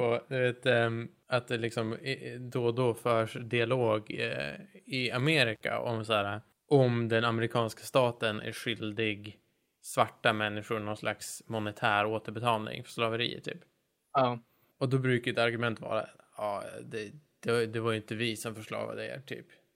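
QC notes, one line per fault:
5.55–5.61 s, intermittent contact: the speech drops out for about 47 ms, with a brief crackle as the signal breaks and again as it returns. A loose plug or cable opening momentarily cuts the feed, leaving faint hiss during the gap.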